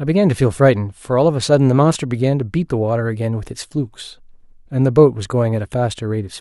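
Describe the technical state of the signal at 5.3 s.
No fault is audible at 5.3 s; the speech signal is intact at that moment.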